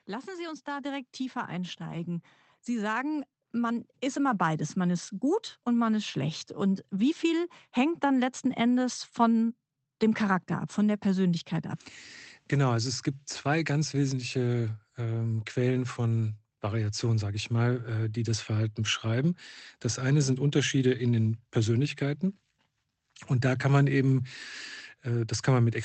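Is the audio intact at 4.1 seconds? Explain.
No. At 4.1 s the automatic gain is still rising, from 0.06 to 6.48 s, gradually adding about 10 dB. Speech and background swell together.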